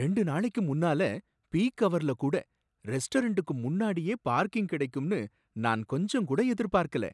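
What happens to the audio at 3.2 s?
Nothing goes wrong at 3.2 s; the speech there plays through cleanly, with no dropout, click, distortion or other fault.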